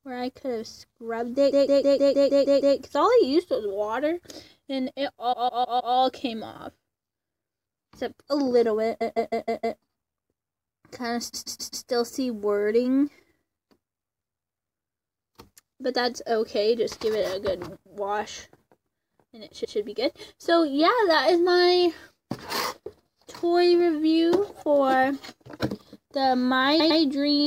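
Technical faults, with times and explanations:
1.50–2.76 s, 5.32–5.94 s, 9.00–9.78 s, 11.33–11.85 s, 19.63–19.76 s, 26.79–27.00 s, repeated frames: a compressed block is replayed whole, about 157 ms in the first three runs, 131 ms in the next two and 105 ms in the last, for 8, 4, 5, 4, 1 and 2 extra plays. Each block fits a run of a few frames. The result is a rhythmic stutter, and the clip runs longer. Dropouts would leave gaps instead of repeating the same block.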